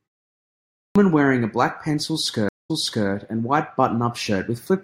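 A clipped start after a pause occurs at 0.73 s. After about 0.73 s of silence from the top of the clip, the output device had dropped into an idle state and needed roughly 0.22 s to wake and lock again. That opening stretch is swallowed, so the line beginning "wearing a black pencil" jumps in abruptly out of silence with its first sounds missing.

A stream reconnect runs from 2.49 s to 3.08 s, just after "wearing a black pencil". The connection broke and the audio went silent for about 207 ms while the player reconnected and started a fresh decoder mid-stream. The server resent a burst, so playback resumes about 384 ms earlier than where it stopped, and material is heard a second time before "and white". The first frame after the restart fades in.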